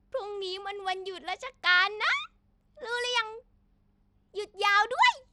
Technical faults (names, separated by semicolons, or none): Bluetooth SBC compression